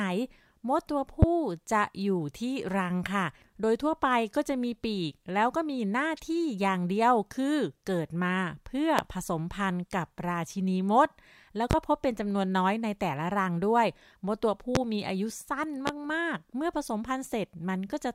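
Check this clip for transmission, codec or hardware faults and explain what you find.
Five loud pops break into this speech clip. They fall at 1.22–1.26, 8.99–9.02, 11.71–11.75, 14.75–14.79 and 15.87–15.91 s. Each is a single sharp thump, far louder than the speech, which continues underneath. A voltage pulse, likely from a plug, switch or static discharge, is added to the signal.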